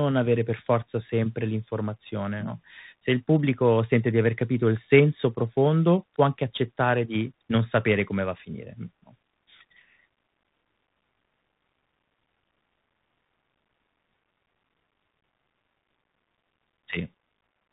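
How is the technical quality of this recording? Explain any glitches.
The technical quality is poor because of one fault that runs through the whole clip.

Tandem speech coding, throughout: the speech was decoded and re-encoded at successive links, apparently ADPCM, then mu-law, then CVSD. Each coder worked on the previous coder's errors, so the speech sounds rough and noisy, with nothing above 3.8 kHz.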